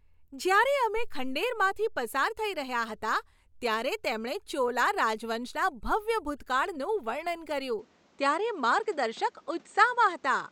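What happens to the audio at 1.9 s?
Nothing goes wrong at 1.9 s; the speech plays through that moment intact, with no dropout, click or distortion.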